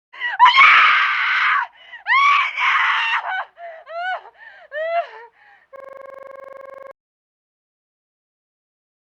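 From 5.76 to 6.91 s, a system hang loop stutters one 43 ms slice at 23 Hz, fitting a 2048-sample buffer, unlike a dropout's silence.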